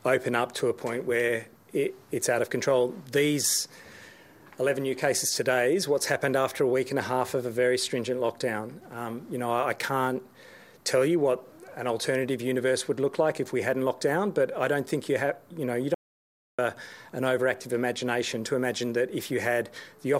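An audio dropout to silence runs from 15.94 s to 16.59 s: the sound cuts off abruptly and about 0.64 s of silence follows, with no room tone, before the audio resumes mid-flow. The input was likely lost briefly while the recorder kept writing zeros.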